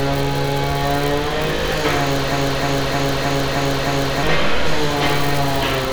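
A short everyday-sound recording with a broken-record loop from 2.32 s to 4.23 s: a 0.31 s fragment repeats six times back to back, and whatever should have played there is gone. Likely the player or stream stalled and kept resending its last buffer.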